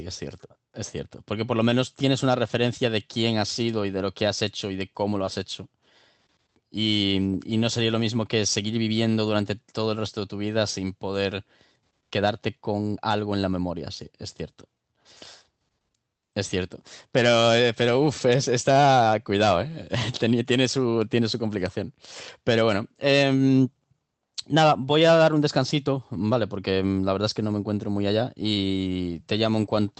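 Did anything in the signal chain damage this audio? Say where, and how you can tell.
Yes. At about 5.25 s a short concealed packet loss in the network stage leaves a brief smear in the speech. Roughly 20 ms of audio arrived too late for the decoder, so the receiver extended the preceding sound to bridge the gap before blending back into the real signal. The call path itself runs through Opus, limiting audio to 8 kHz.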